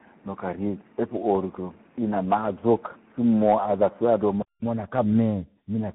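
Speech passed through tandem speech coding: two speech coders in a row, the last sounding like CVSD, each re-coding the other's degraded output, giving a rough, warbly, muffled quality throughout, with a spectrogram showing nothing above 3.8 kHz and smeared, grainy harmonics. From 0.0 to 4.62 s the sound is duller, with nothing above 3.3 kHz, a faint noise floor roughly 35 dB down and a level about 5 dB different. A 200 ms silent gap in the waveform then precedes a brighter band, likely from an input switched to a poorer device.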